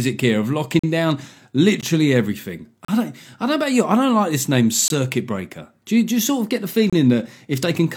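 Speech with gaps between stream segments: hard-edged silent holes at 0.79–0.84 s, 1.81 s (before "everything I don't I"), 2.85–2.88 s (before "I don't I don't"), 4.88–4.90 s and 6.90–6.93 s (after "sort of get the"), lasting 16 to 42 ms. They sit on one-second segment boundaries whose timestamps don't quite meet, so silence is inserted. Unlike a dropout, no audio is lost, and the speech resumes exactly where it stopped.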